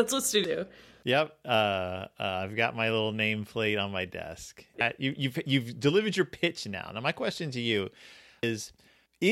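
Brief glitches at 0.44 s, 4.81 s (after "nameplate on my desk", before "you you've you've delivered") and 8.43 s are damaged data in a compressed stream: corrupted frames throw the decoder out of sync.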